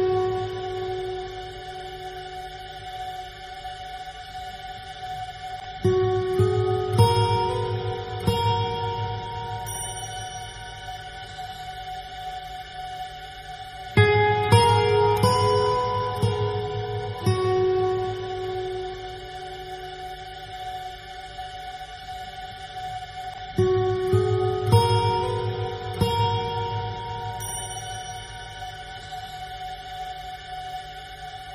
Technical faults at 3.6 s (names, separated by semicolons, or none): compressed frames skipped